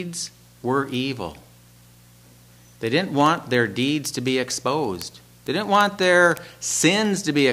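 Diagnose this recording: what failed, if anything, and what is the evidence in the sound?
Word clock ticks from a digital link whose receiver isn't locked to the sender's clock. From 0.15 s to 7.5 s, ticks recur roughly twenty times a second, around 150 in all. Each marks one sample dropped or repeated as the clocks slip, which fits a mismatch of a few hundred ppm.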